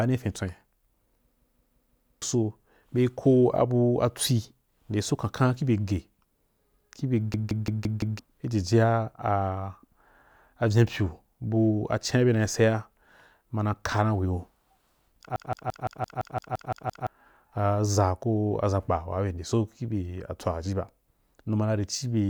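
At 1.37 to 2.22 s, just before "so be", then 7.34 to 8.19 s and 15.36 to 17.07 s, the speech breaks into a system hang loop: the driver stalled while the hardware kept replaying one 171 ms buffer, which fits an 8192-sample ring. It sounds like a machine-gun stutter at about 5.9 Hz, repeating five, five and ten times, with roughly a second, a second and one and a half seconds of speech lost.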